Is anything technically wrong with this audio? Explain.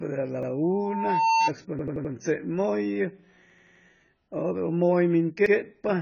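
Yes. The speech has three kinds of technical fault.

AAC compression is heard throughout. Nothing is present above 6.9 kHz, and the damage is heavy. The sound is dull and smeared, with a warbling, fizzy edge on sibilants and held sounds. This is likely AAC-LC coding at a very low bitrate, around 16 kbps. At that rate the encoder lowers its cut-off and leaves gaps in the spectrum, or fills bands with substitute noise.

A repeated buffer occurs four times. From 0.43 to 0.51 s and from 5.46 to 5.55 s, one short piece plays twice. From 1.79 to 2.13 s and from 3.50 to 3.84 s, it plays five times in a row. Each piece lasts about 85 ms, which fits a 4096-sample buffer. New audio arrived late, so the device replayed the last buffer. Each repeat ends in a hard join, heard as a stutter. None of the audio itself seems to be lost.

A loudspeaker feedback squeal runs from 0.63 to 1.50 s. It is a single tone at 902 Hz that swells over about 0.7 s and peaks at about 5 dB above the speech. 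A microphone was picking up the loudspeaker that it fed. At that frequency the loop's gain exceeded one, so the tone fed on itself.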